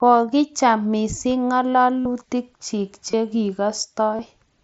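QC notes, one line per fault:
2.01 to 2.05 s, concealed Bluetooth headset packet loss. About 52.5 ms of audio is missing. The receiver filled the gap by repeating the closest-matching recent stretch of waveform, which fits seven lost 7.5 ms frames. That is why a short buzzy tone sits at full level, with a slight warble as the real sound resumes.
3.11 to 3.13 s, concealed Bluetooth headset packet loss. A 22.5 ms gap is patched the same way. It is a brief tonal smear.
4.17 to 4.19 s, concealed Bluetooth headset packet loss. Another 22.5 ms patch gives a similar short buzz.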